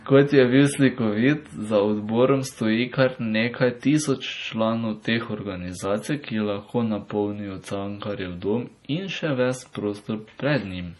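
From start to finish the speech sounds watery and swirly, with nothing above 11.5 kHz; heavy MP3 compression is the likely cause, which fits a starved bitrate around 32 kbps.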